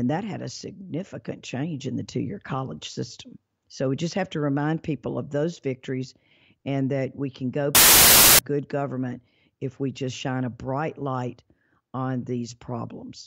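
A speech recording in which samples built from the wrong bytes turn 7.75 to 8.39 s into loud, harsh broadband noise: the bytes of each sample are joined in the wrong order or offset, so the fast-changing low bits dominate. On a spectrogram this shows as a flat band filling every frequency, and the waveform jumps to loud hash.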